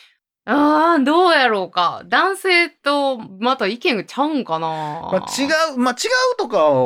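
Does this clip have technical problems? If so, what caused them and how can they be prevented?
No, nothing stood out as a technical problem on listening to this speech recording, so there is nothing here that calls for prevention.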